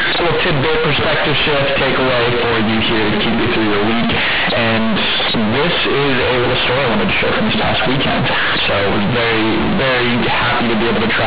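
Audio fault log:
throughout: companded audio read as linear. A-law bytes play as raw 8-bit samples without expansion, so quiet speech swings as widely as loud, giving buzzy distortion and noisy pauses.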